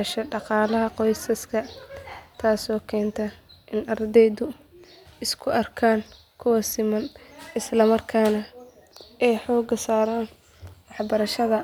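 No audible faults are present in this speech recording; nothing in it calls for comment.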